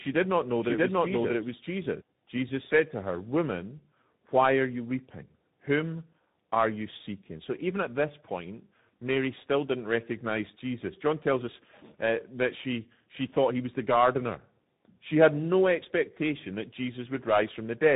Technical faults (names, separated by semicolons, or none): tandem speech coding